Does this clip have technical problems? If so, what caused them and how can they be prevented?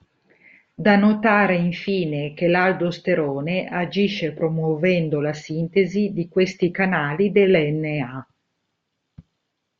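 No, this clip has no technical problems, so there is nothing to trace back or prevent.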